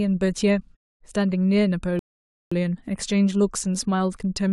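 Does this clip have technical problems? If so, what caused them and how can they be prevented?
Yes. A rebuffering stall: the player used up its downloaded audio and halted until more data arrived. The speech cuts to silence from 1.99 to 2.52 s, then resumes exactly where it stopped. Nothing is lost, but 0.52 s is added. A larger playback buffer, or adaptive streaming that drops to a lower bitrate before the buffer empties, would prevent it.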